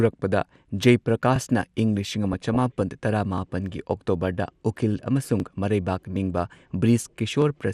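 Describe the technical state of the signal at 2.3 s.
At 2.3 s the signal is in a burst of DAB burbling. It runs from 2.24 to 2.81 s, right after "ꯏꯪ ꯂꯤꯁꯤꯡ". Bit errors in the received stream got past the error correction, at a rate of about 0.2 percent, and 26 frames are hit. Damaged samples put short blips of noise into single sub-bands, and damaged scale factors make sub-bands jump in level for up to a frame. The speech is overlaid with these brief noise blips.

Underneath sits MP2 compression, present across the whole clip. The sound is split into 32 sub-bands, and too few bits are shared among them. Upper bands drop out and flicker back. The bands that remain are coarsely quantised. The result is dull and gurgling, with a granular edge. The damage is plainly audible, and it fits a rate of about 80 kbps. The likely cause is a starved MP2 encoder.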